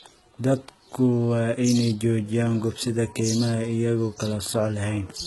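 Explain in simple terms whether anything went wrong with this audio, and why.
HE-AAC compression runs through the whole clip, from start to finish. The speech's top end is partly fake and cuts off completely above about 11.8 kHz. This is likely a low-data HE-AAC stream, which keeps only the lower part of the sound and rebuilds the treble by copying lower bands upward. The copied treble doesn't match the real overtones, so the heavily damaged s sounds come out gritty, lispy or metallic.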